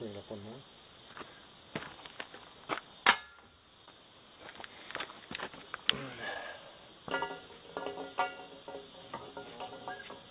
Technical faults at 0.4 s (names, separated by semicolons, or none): none